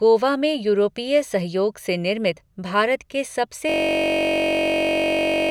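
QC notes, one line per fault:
3.70–5.51 s, system hang loop: right after "के सबसे" the audio freezes into one 21.33 ms slice repeating to the end, so you hear a steady buzz at about 47 Hz. The system stalled while playback kept cycling a buffer that likely holds 1024 samples.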